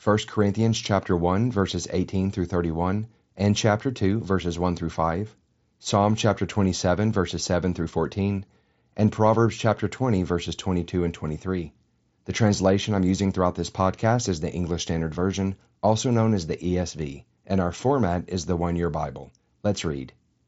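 No technical faults are present.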